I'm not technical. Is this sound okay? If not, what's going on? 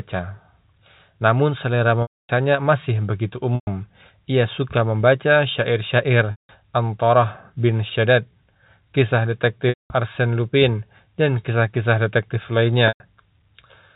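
No. Chunks of the speech went missing in transit (packet loss with pitch repetition), and the receiver filled each gap by repeating the last bit of voice, which fades out. You hear a brief buzzy hold or dropout at 2.02–2.29 s (just before "masih begitu"), 3.55–3.67 s (just after it), 6.31–6.49 s, 9.69–9.90 s and 12.88–13.00 s.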